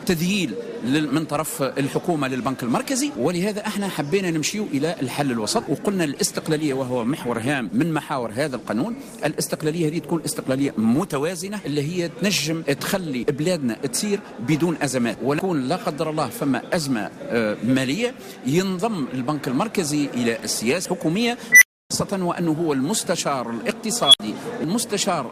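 From 6.41 s to 11.61 s the audio goes rough and somewhat muffled, the sign of a call bitrate drop. The encoder's rate falls from 96 kbps to 28 kbps and stays at its lowest for about 5.1 s, so the audio is coded coarsely and loses its top end. Unlike packet loss, nothing drops out or stutters. The texture degrades evenly across the whole span and clears once the rate recovers.

At 21.52 s a tone of roughly 2 kHz swells to a harsh, clipped squeal within about 95 ms. The audio then cuts to silence for 290 ms before returning at 21.91 s. A second, higher tone near 3 kHz starts at 24.02 s, peaks after about 113 ms and is followed by a 60 ms gap ending at 24.20 s. This is an unstable filter: bad coefficients make a recursive filter's output grow until the numbers overflow and it resets. Acoustic feedback howl builds more slowly and never ends in such an abrupt, dead silence.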